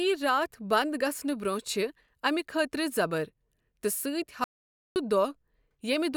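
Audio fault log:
4.44–4.96 s, audio dropout to silence: the speech cuts to silence for about 0.52 s with no room tone, likely from a momentary input loss.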